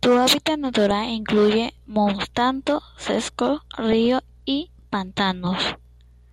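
A speech clip with two bursts of DAB burbling, at 0.76 to 0.91 s just before "incluye montanos secos" and at 3.92 to 4.06 s right after "incluye montanos secos". Weak reception leaves a few uncorrected bit errors per thousand in the MP2 data, putting short blips of noise into individual sub-bands.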